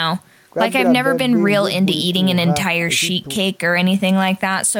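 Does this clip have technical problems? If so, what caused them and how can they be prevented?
Yes, there's a DC step at 3.36 s: the waveform's zero line jumps, giving a low thump, and the offset holds to the end. Keep gain-stage offsets stable and high-pass the input.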